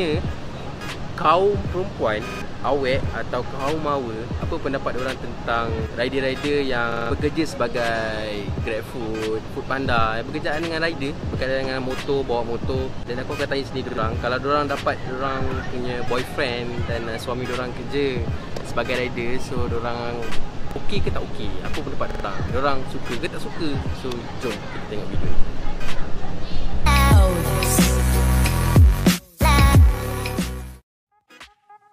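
Repeated buffer stutters occur at 2.28–2.42, 6.92–7.11, 13.89–13.98, 20.71–20.76 and 22.11–22.25 s. Late audio made the device replay one roughly 46 ms slice, which fits a 2048-sample buffer, with hard joins. Unlike a dropout, identical material loops instead of going silent.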